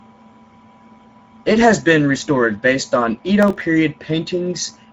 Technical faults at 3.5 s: Speex codec; processor overload crackle

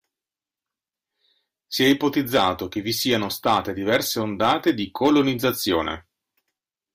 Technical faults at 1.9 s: hard clipping

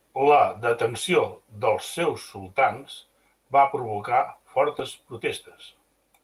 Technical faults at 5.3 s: none

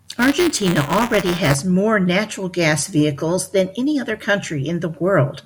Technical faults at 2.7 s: none

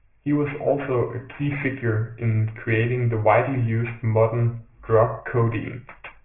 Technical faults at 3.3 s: aliasing

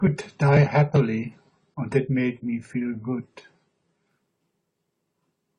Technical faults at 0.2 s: adaptive stream starting at a low bitrate

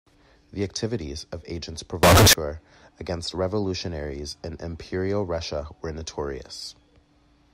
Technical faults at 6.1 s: none

